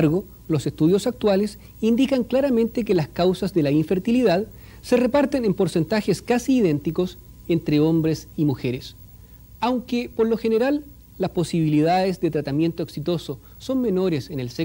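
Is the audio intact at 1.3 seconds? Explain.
Yes, at 1.3 seconds the audio is intact, with no dropout, click, distortion or other fault to be heard at that moment.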